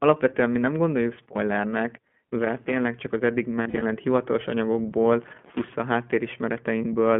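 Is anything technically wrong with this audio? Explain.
Yes. The whole clip of speech runs through the iLBC codec, a narrowband VoIP coder working in 20 ms frames at 15.2 kbps. Each frame's excitation is coded independently and the line passes only about 150 Hz to 3.4 kHz, so the speech sounds band-limited, thin and plainly rough or synthetic throughout.

Loose connector crackle appears from 2.40 to 2.82 s, right after "mi nem gondoljuk spoilernek" and before "csak az eddig", and again from 5.22 to 5.75 s. A dirty or worn contact is making and breaking, chopping the signal, heard as irregular bursts of scratchy crackle.

Lost iLBC frames occur between 3.62 and 3.83 s, just after "csak az eddig". About 120 ms of audio is missing, scattered over 200 ms in short runs of up to roughly 40 ms. The decoder fills each gap by repeating the last pitch cycle with noise, giving brief held, buzzy vowel-like sounds, and it recovers almost immediately because frames stand alone.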